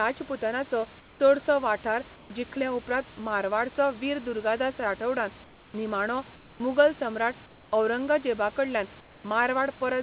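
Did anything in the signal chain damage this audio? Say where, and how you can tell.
Yes, in call processing: comfort noise replaces the background in the speech pauses at 1.0–1.2, 2.16–2.3, 5.44–5.74, 6.36–6.6, 7.46–7.72 and 9.0–9.24 s. The room noise turns flat and featureless and drops about 2 to 5 dB, likely because discontinuous transmission stopped sending and the receiver synthesized filler.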